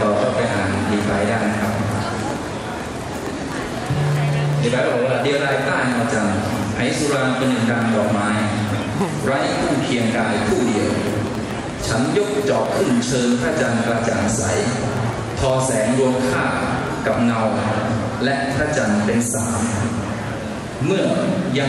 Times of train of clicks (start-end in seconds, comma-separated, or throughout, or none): 0.06-17.31